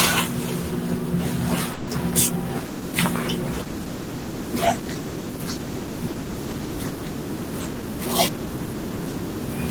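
Packets were likely held up and the jitter buffer ran empty, giving a call audio freeze at 1.73 to 1.89 s: 140 ms of fading buzz or hiss fills the gap before speech resumes intact. From 2.66 to 7.56 s, a call bitrate drop cuts the encoder from 32 to 18 kbps, lowest for 3.84 s, so the speech turns coarse and watery. From 7.59 to 9.20 s, a jitter buffer speed-up trims pitch periods to shed about 150 ms of backlog, and the speech runs 9% faster at unchanged pitch, sounding hurried.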